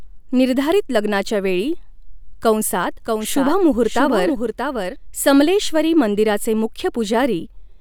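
From 2.82 to 4.96 s, just before "समलेश्वरी मंदिराचे", a dry second copy of the speech trails roughly 0.7 s behind, somewhat quieter, switching in and out abruptly. This doubled audio track likely comes from a slower capture path mixing the signal in twice.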